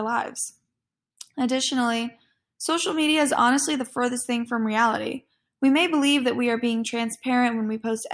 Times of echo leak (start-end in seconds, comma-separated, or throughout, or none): none